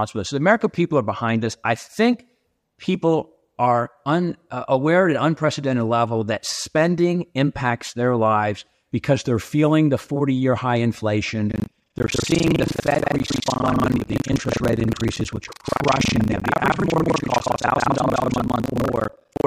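From 11.48 s to the end, the speech carries a robotic rattle buzzing at 25 Hz, heard only while sound is present. This is buffer tearing: the writer and the hardware reader have slipped, so about half of each 40 ms period holds audio from roughly 150 ms earlier, hard-joined on both sides.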